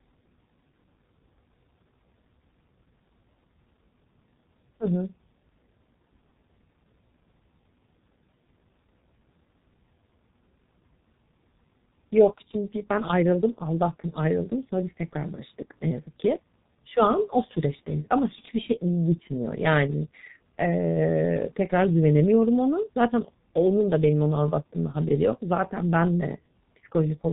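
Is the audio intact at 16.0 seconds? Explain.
No. At 16.0 seconds the speech, like the whole clip, carries heavy G.723.1 codec damage. Nothing survives above 3.8 kHz, and the codec rebuilds the voice from a coarse model refreshed only every 30 ms or so, at a rate that fits a roughly 6 kbit/s coder. The result is muffled, hoarse speech with smeared consonants. A simple low-pass filter or a clean telephone codec would dull the top end without that rough, hoarse texture.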